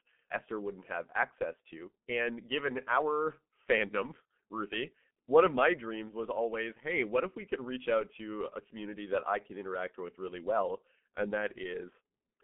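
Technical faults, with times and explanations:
throughout G.723.1 codec: low-rate frame coding, consistent with about 6.3 kbit/s, cuts everything above 3.7 kHz and smears consonants, leaving speech muffled and hoarse.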